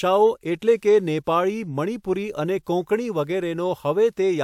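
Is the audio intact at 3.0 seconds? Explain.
Yes, at 3.0 seconds the speech plays through intact, with no dropout, click, distortion or other fault to be heard at that point.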